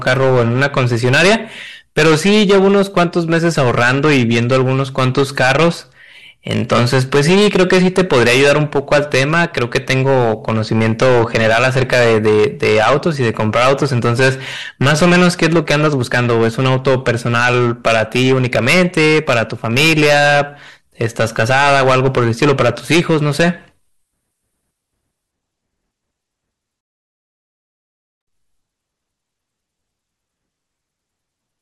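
Hard clipping runs through the whole recording: the speech is pushed roughly 16 dB past what the stage could handle, so about a tenth of the samples get their peaks sheared flat. That adds a harsh, fuzzy edge to every louder syllable.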